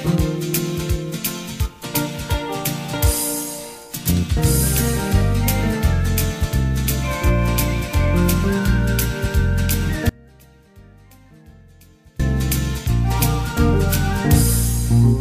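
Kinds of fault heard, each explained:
Audio dropout to a faint residue: at 10.09 s the sound cuts off abruptly in mid-flow and returns just as suddenly at 12.20 s. For those 2.1 s only a faint trace of it remains, roughly 30 dB below its normal level, with none of the gradual shape of a fade or natural pause. The likely cause is a brief loss of the wanted signal while the path after the break stayed live, letting only leakage through.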